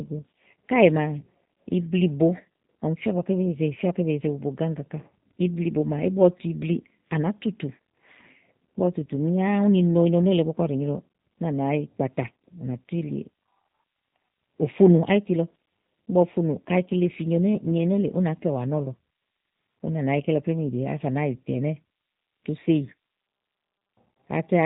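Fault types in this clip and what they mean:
G.729 codec, throughout: the speech has the narrow, slightly rough and synthetic quality of the G.729A low-rate telephony codec, and the damage is plainly audible. The codec rebuilds each 10 ms frame from a model of the vocal tract, a pitch predictor and a handful of pulses, so nothing above 4 kHz survives. Consonants lose their crispness, and the texture has the coarse, buzzy edge that fits an 8 kbit/s stream.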